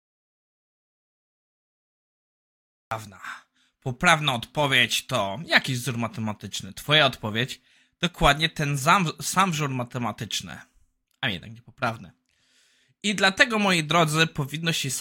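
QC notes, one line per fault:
0.00–2.91 s, audio dropout to silence: input likely lost from the start with silence written, so the speech begins after complete silence with no room tone.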